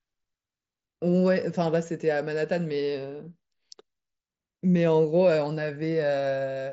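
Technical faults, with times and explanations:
No technical faults; the speech comes over a Bluetooth mSBC headset link, band-limited at 8 kHz with the light grain that codec leaves on louder sounds.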